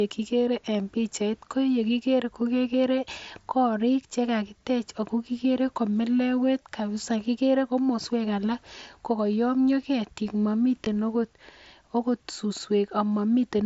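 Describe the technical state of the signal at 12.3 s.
At 12.3 s the speech is intact, carried over the wideband Bluetooth mSBC headset link with nothing breaking or interrupting it at that point.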